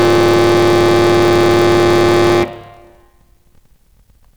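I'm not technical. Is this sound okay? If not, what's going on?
No. Throughout the music there is a steady low buzz, about 38 times a second, and everything plays a little slow, at roughly 89% speed. That is a block size mismatch (padded): one stage hands over audio in chunks, which fits 1024-sample blocks, but the next stage expects larger chunks. It fills each gap with silence. Unlike a wrong-speed playback, the character of the sound stays normal.

From the start until 2.44 s, loud moments also turn into a harsh, gritty fuzz. That is hard clipping: the music is pushed far past what a stage can carry, so its loudest parts are chopped flat. Unlike the buzz, this fuzz rises and falls with the loudness and stops at 2.44 s.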